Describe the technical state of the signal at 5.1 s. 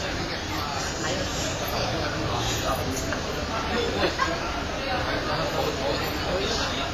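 At 5.1 s the audio carries heavy damage of the kind left by WMA compression, which runs through the whole clip. It is likely a transform codec working with long blocks at a low bitrate: quantisation noise smears over tens of milliseconds and weak components drop out. The result is ringing and washy, with hiss that swells and fades with the signal, nothing above 15.5 kHz, and a heaviness that fits a rate near 24 kbps.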